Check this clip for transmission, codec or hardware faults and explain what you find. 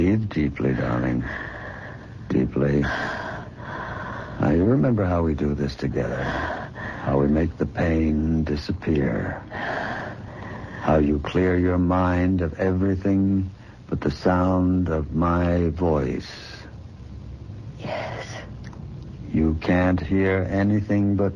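No transmission, codec or hardware faults can be heard anywhere in the clip. The sound holds steady throughout, with nothing that points to a problem in the chain that carried it.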